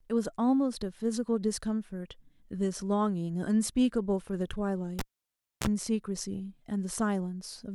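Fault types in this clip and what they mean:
Cable pulled and plugged in: a live lead pops out at 4.99 s, goes near-silent, buzzes at 60 Hz, then pops back at 5.67 s.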